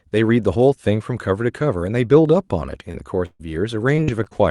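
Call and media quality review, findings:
Short concealed packet loss, 2.91–2.96 s: quick smear in the speech, about 20 ms of real audio gone and patched by the jitter buffer's concealment, which extended the preceding sound for roughly 23 ms before crossfading back. Small, but a short consonant could drop there.

Burst of packet loss, 3.26–3.41 s: about 140 ms missing in one chunk. Concealment holds the last sound and fades it, with about 40 ms of that going fully silent, then speech picks up further along. Classic run of dropped or late packets.

Repeated packet loss (robotic sound), 3.95–4.33 s: choppy stretch. Four separate holes, longest about 41 ms, roughly 100 ms lost in total, so around a quarter of that span is synthetic fill. Repeated late or lost packets through the Opus decoder's concealment, with top end capped near 12 kHz as usual for this path.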